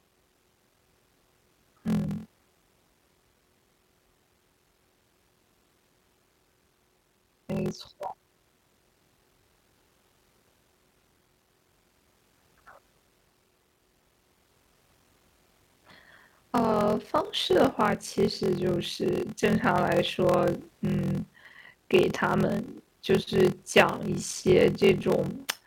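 Throughout, a block size mismatch (padded) zero-fills each 1024-sample read, giving a steady 43.1 Hz buzz and speech slowed to 0.861x with its timbre kept, unlike resampling slowdown.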